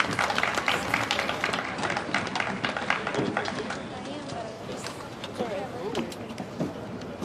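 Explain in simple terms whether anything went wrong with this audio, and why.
From 1.58 to 4.64 s, digital radio blending to analogue FM kicks in: faint hiss appears, though volume stays steady.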